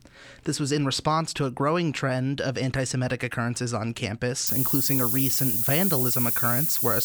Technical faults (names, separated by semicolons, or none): low bit depth with noise shaping